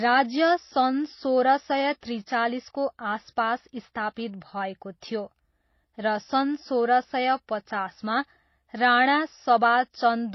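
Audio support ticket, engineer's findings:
Speech band-limited for the whole clip, nothing above 5.8 kHz. Two distinct artefact textures layered, heard together. Likely transcoding between lossy codecs: a low-rate MP3-type encode re-encoded through HE-AAC, the second stage spending bits on the first stage's damage and adding its own. Unlike a single low-bitrate encode, both artefact signatures coexist, and the lowest cut-off in the chain persists.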